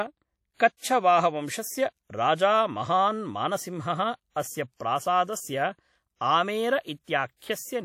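From start to finish the speech carries a ringing, washy smear, with a hiss that swells and fades along with the voice, and nothing is present above 17.2 kHz. This is plainly audible WMA compression, likely from a transform encoder working with long blocks. Its quantisation noise spreads over tens of milliseconds around each sound, and weak spectral detail gets discarded. The damage level fits a bitrate of about 48 kbps.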